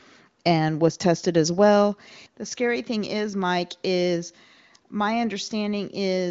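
No technical faults are audible.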